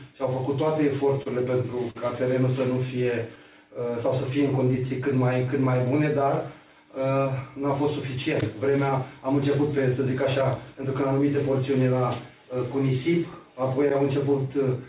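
Short stalls from late packets at 1.23–1.28 s and 1.90–1.97 s: the jitter buffer ran dry, so the receiver held the last sound for 28 ms and then 45 ms until each packet arrived, leaving a brief drawn-out sound with a slight buzz or dip and nothing lost. Scattered short gaps between 2.59 and 3.38 s: around five small holes, the longest roughly 15 ms, were patched by continuing the preceding sound, giving brief ticks and smears. Jitter buffer slow-down from 3.43 to 6.25 s: to build reserve, the receiver repeated pitch periods and pause fragments, adding 178 ms so the audio plays at 94% speed without any pitch change. Jitter buffer speed-up from 8.17 to 11.37 s: with surplus buffered audio, short pitch-period pieces were cut out, removing roughly 200 ms and running the sound at 106% speed, slightly hurried. Throughout, the audio carries the band limit of a call codec, with nothing above 4 kHz, which fits a G.711 A-law path at 64 kbps.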